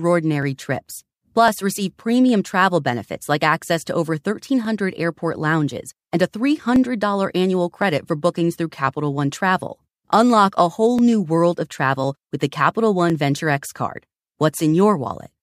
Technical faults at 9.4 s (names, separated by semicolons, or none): clock drift buffer slips